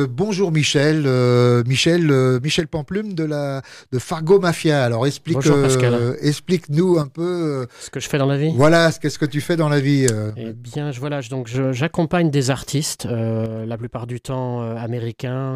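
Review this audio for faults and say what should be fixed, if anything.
The most likely cause is one channel dropping out: one of the two stereo channels goes silent for a while, so the mono sum loses half its contribution. Four times the sound abruptly falls by about 6 dB and is otherwise unchanged: 2.60 to 4.21 s, 7.02 to 8.01 s, 10.30 to 11.55 s, and 13.46 s to the end. Each level drop, and each of the first three recoveries, is a sharp step. To prevent it, check both channel paths, including cables, connectors and the stereo interface inputs, and monitor per-channel levels during capture.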